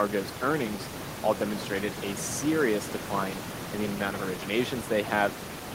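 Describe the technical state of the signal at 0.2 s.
At 0.2 s the signal is intact, with only the room's background noise present at about 11 dB below the speech.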